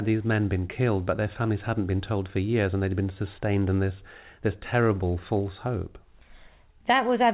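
No technical faults can be heard in this speech. It arrives over a WebRTC call path whose sound fits G.711 mu-law coding, with nothing above 4 kHz and the usual coding noise of a narrowband telephone-style link.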